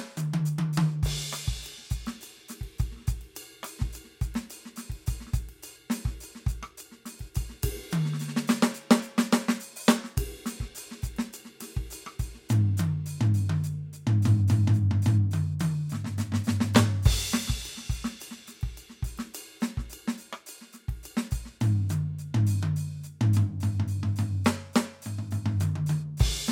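A music recording with nothing technically wrong with it.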